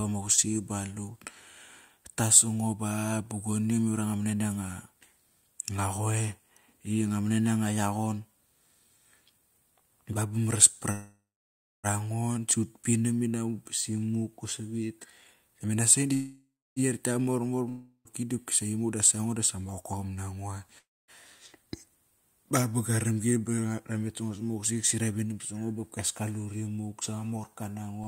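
From 10.91 to 11.87 s there is a call audio freeze. The last sound is stretched into a fading buzz that gives way to silence for about 0.64 s, then the speech resumes exactly where it stopped. Nothing is lost, but the speech now runs about 0.92 s later than before, which points to a likely cause of packets stalling in transit until the jitter buffer emptied.

From 15.01 to 16.12 s a jitter buffer speed-up follows. The speech plays at about 126% speed with no rise in pitch, and roughly a third of a second is trimmed away in many small pitch-period cuts. This makes it sound rushed rather than chipmunk-like, as the receiver drains the backlog that built up.

At 16.14 to 16.79 s a second freeze fills about 0.63 s, including 0.29 s of silence, and again nothing is missing afterward.

The long network dropout at 17.69 to 18.08 s starts the same way, with a fading buzz and a brief silence, but unlike a freeze the speech comes back further along. 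About 0.36 s of it is never heard, with a likely cause of packets lost outright rather than merely late.

The speed-up recurs, milder, at 18.69 to 20.05 s at 110%, removing around 0.15 s. A second dropout at 20.78 to 21.11 s skips about 0.4 s, with a quarter second of silence, and shortens the delay by roughly a tenth of a second. A last gentle speed-up at 21.68 to 22.17 s runs at 107% and trims only a few hundredths of a second.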